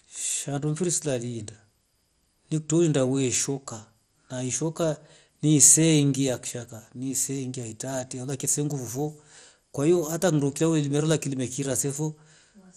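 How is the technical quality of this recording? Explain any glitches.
The recording has plainly audible MP2 compression damage running from start to finish. The speech sounds dull, with a gurgling, granular texture on the voice. Nothing is present above 14.5 kHz. The likely cause is MPEG Layer II coding at a low bitrate, around 64 kbps. Short of bits, the encoder shuts off the upper sub-bands entirely and quantises the remaining ones coarsely. As bands drop in and out, the sound flickers and becomes grainy.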